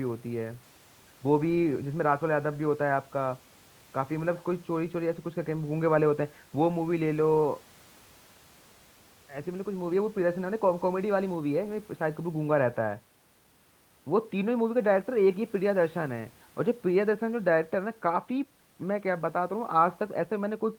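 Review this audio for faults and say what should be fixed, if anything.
Nothing to fix: no faults found, and the room's background noise sits about 35 dB below the speech as part of the recording.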